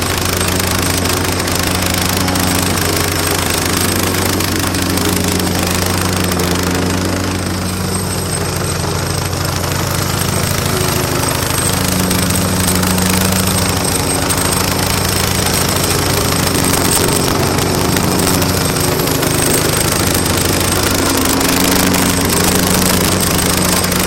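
Sounds run through integer overflow across the whole clip. The signal is pushed about 8 dB past full scale, and under one percent of samples exceed the limit. Those peaks wrap to the opposite sign instead of being held there, so loud moments break into harsh cracks far sharper than ordinary clipping.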